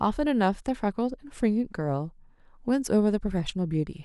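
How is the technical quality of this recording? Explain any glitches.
No glitches or technical faults can be heard here.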